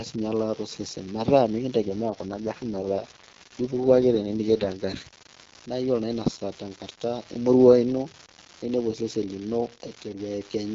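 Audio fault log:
Throughout: unreliable data bit. One data line in the chain is marginal, so its bit comes out wrong in a random share of samples, and each flipped bit adds a spike of the same fixed size. Scattered across the whole recording, these spikes form a steady crackle or fizz under the speech that carries straight on through the pauses, because the fault sits in the hardware path rather than in anything the talker does.
1.82 to 4.84 s: AMR rate drop. The AMR-WB link, carrying speech at 12.65 kbit/s, is told to fall back to 6.6 kbit/s, which is the lowest wideband rate, and to spend the freed bits on error protection. The bandwidth holds and nothing drops out, but for these three seconds the speech turns rough, raspy and synthetic. It returns to the lightly coded HD Voice quality once the higher rate comes back.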